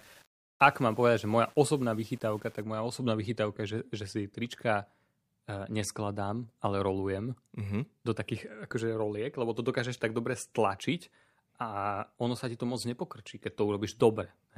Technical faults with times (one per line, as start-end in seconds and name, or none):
0.00-2.62 low bit depth without dither